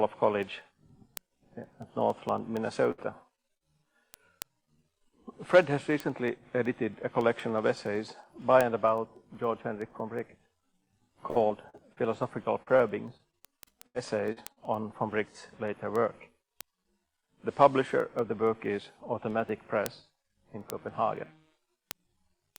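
From 0.15 s to the end, sharp ticks of uneven strength repeat about ten times a second. These are word clock ticks: the receiving device runs on its own clock, a couple of hundred parts per million off the sender's, so each time the clocks slip, a single sample is dropped or repeated.

At 2.91 to 3.00 s the sound is briefly held and fades before jumping ahead. This is a burst of packet loss. About 60 ms never arrived in time, and the receiver stretched the last audio across the hole, so that stretch is missing when playback resumes.

Two quick smears follow at 3.36 to 3.39 s and 3.57 to 3.63 s. Each is a short concealed packet loss, with about 20 ms and 40 ms lost. The receiver continued the preceding sound to fill each gap, then blended back into the real signal.

From 11.31 to 11.99 s, and again from 12.63 to 14.58 s, the sound turns choppy and robotic. This is repeated packet loss: packets kept going missing, with four gaps totalling 140 ms in the first stretch and nine gaps totalling 300 ms in the second, the longest 80 ms. 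Each gap was patched by extending the last sound before the next loss arrived.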